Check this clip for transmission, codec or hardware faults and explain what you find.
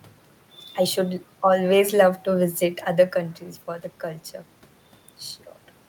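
No transmission, codec or hardware faults turn up here; the room noise is just part of the recording, and the change in level around 2.5 seconds is only the talker moving relative to the microphone.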